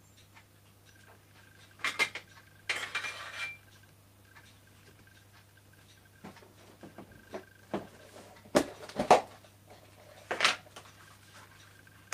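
No technical faults can be heard in this recording. Nothing in it points to a broken path or a failure in capture or playback.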